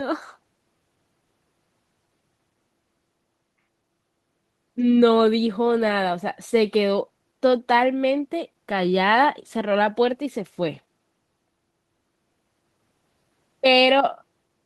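No technical faults can be heard anywhere in the speech.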